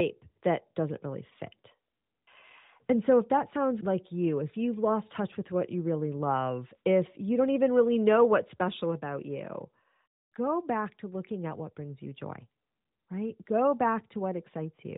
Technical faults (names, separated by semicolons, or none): none